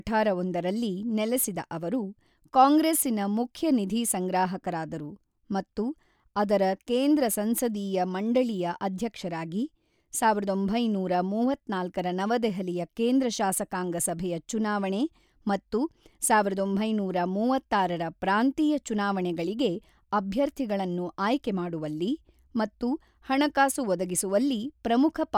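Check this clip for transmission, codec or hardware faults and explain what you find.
No transmission, codec or hardware faults can be heard here.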